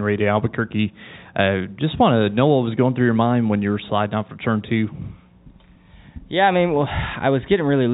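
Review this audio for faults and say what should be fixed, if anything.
Nothing here needs fixing. The speech comes through G.711 telephone coding, so the sound stops at 4 kHz and a faint quantisation noise about 38 dB under the signal rises and falls with its level, as that format normally gives.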